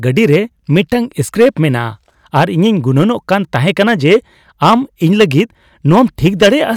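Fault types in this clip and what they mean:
Hard clipping: the speech is driven about 9 dB beyond what one stage in the chain can hold, so the loudest parts of each peak are sliced off square, a few percent of the samples throughout the clip. The flattened tops give a gritty, crackling edge to louder syllables. On a waveform the peaks sit pinned against a flat ceiling; a spectrogram shows bright vertical smears of harmonics reaching far up into the high kHz range at those moments.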